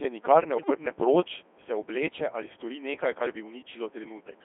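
A steady, raspy 60 Hz mains buzz runs under the whole clip, roughly 20 dB below the speech. Its harmonics come from switching spikes leaking into the signal path. Throughout, the speech is heavily damaged by the Codec 2 vocoder. It is confined to 300 Hz to 3.5 kHz and resynthesised from pitch, voicing and envelope parameters, which sounds robotic and buzzy and fits a 2.4 kbit/s mode. From 0.58 to 0.70 s, between "nikar ne" and "proč se obleče ali", bit errors on the digital voice radio corrupt a few vocoder frames at around one bit in ten. The voice lurches in pitch and level and breaks into warbling gibberish.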